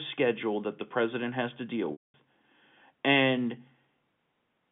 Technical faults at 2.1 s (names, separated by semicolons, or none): packet loss with pitch repetition